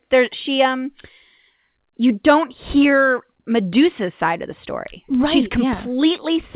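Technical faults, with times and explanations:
No technical faults heard.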